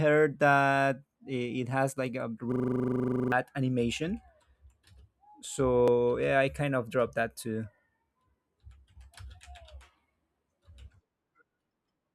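After "it has like a", from 2.52 to 3.32 s, a system hang loop replays one 40 ms chunk as a 25 Hz buzz, showing identical waveform blocks and evenly striped spectrogram columns.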